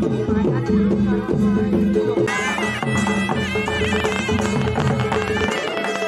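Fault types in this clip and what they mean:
Train of clicks: From 3.85 s to 6.03 s, a rapid run of similar clicks ticks over the sound at about 12.9 per second, unevenly spaced. There are roughly thirty, well above the signal level. Likely cause is interference or a faulty connection or power supply.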